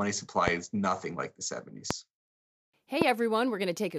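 A loud pop strikes at 0.48 to 0.50 s, before "is nothing like the." Others follow at 1.91 to 1.93 s, after "is nothing like the," and 3.02 to 3.04 s. Each is one sharp click, roughly 20 dB over the speech, which continues underneath. A voltage spike, likely static or a switch, caused them.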